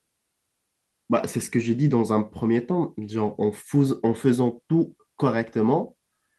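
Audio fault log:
No faults are heard anywhere in this speech recording.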